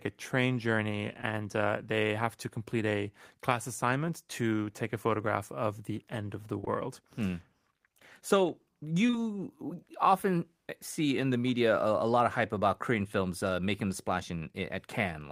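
Speech, with short concealed packet loss at 1.21 s, between "a train journey" and "uh they have to"; at 6.61 and 6.65 s, back to back just after "the end of the"; and at 9.07 and 9.11 s, also back to back. Each event lost 20 ms of audio that the receiver filled by extending the preceding sound before blending back, so the gaps come across as brief smears or wobbles rather than the silent holes or clicks of an unconcealed dropout.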